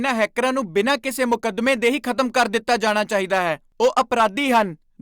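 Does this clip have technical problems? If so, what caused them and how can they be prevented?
Yes. The speech is hard clipped throughout the clip. The level driven into the converter or a later fixed-range stage was about 9 dB above what it could pass, so the loudest peaks were sliced flat. Only a small share of samples, somewhere around one or two percent, hit the ceiling. The result is crackle on peaks from squared-off waveforms adding high harmonics. Prevent it by leaving at least 10 dB of headroom at every gain stage before the limit.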